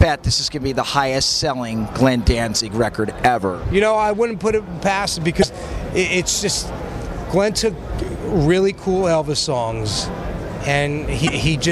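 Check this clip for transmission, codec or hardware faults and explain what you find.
Two short faults, both damaged data in a compressed stream, at about 5.40 to 5.44 s and 11.25 to 11.29 s. Corrupted frames there throw the decoder off sync while it hunts for the next valid header, so each 44 ms stretch comes out as a quick chirp or blip.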